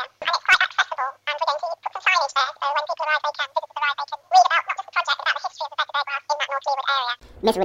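From start to finish, the audio is read two samples at a time, at double speed: the reader treats each pair of samples as a single frame. Everything plays twice as fast and a full octave, 12 semitones, higher.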